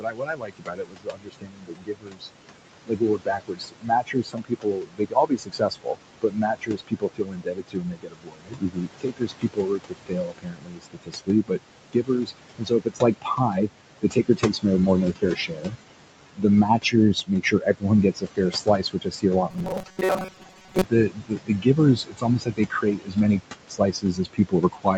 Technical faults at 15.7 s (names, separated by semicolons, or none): noise suppressor artifacts; speech cut by the noise suppressor